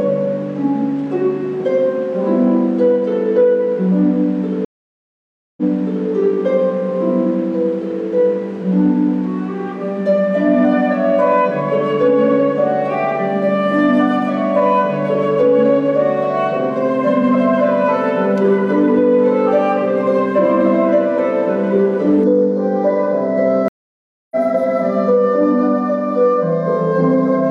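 From 4.65 to 6.08 s a stream reconnect breaks the audio. After about 0.92 s of silence, playback resumes roughly 0.51 s earlier, repeating material, and the restart is muted or fades in. That jump back in time separates it from a simple dropout, which would resume where it stopped.

From 22.24 s to the end, channel delay (comb filtering) makes the sound hollow and phasey. One channel lags by a fraction of a millisecond before the mono sum, cutting fixed, evenly spaced notches from about 3 kHz upward. Unlike ordinary treble loss, the notches stay put and hollow the sound rather than simply dulling it.

Inside that stretch, at 23.68 to 24.36 s, a second reconnect brings about 0.63 s of silence, and the audio resumes roughly half a second later, so material is skipped.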